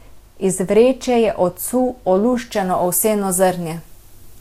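From 2.53 s to the end, pre-emphasis is left on. The 50/15 µs treble boost was never undone, lifting 10 kHz about 8 dB over 1 kHz. Speech turns thin, bright and sibilant.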